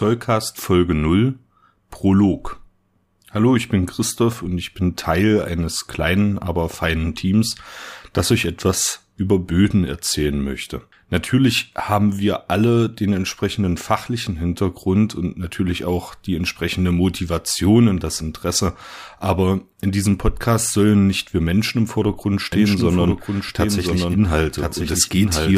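From 22.52 s to the end, a doubled audio track appears: the same speech returns about a second later, roughly 5 dB quieter, likely from a second, slower capture path. Unlike an echo, the copy arrives once, full-band and dry, and cuts in abruptly with no decay.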